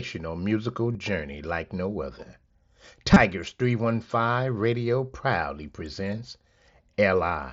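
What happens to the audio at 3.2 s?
Concealed Bluetooth headset packet loss from 3.14 to 3.16 s: about 22 ms of voice packets, consistent with three, were lost and patched by repeating recent waveform, leaving a brief buzzy blip and slight warble.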